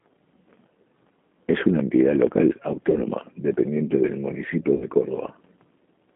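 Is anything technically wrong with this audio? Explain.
Yes, the speech carries codec damage throughout and two concealed dropouts. G.729 codec, whole clip: speech is rebuilt at 8 kbit/s from a filter and sparse pulses, confined to 200 Hz–3.5 kHz, so it sounds narrow, rough and synthetic. VoIP packet loss concealed by the speech codec, at 2.90–3.01 s and 4.75–4.86 s: about 30 ms, then 60 ms, were lost (fitting one and two packets). The decoder stretched the previous sound into a fading buzzy tone or coloured noise, leaving it weak briefly afterwards.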